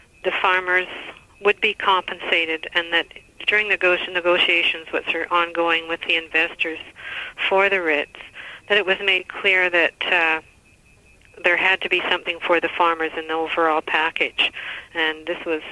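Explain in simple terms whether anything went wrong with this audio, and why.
Nothing went wrong; no faults can be heard.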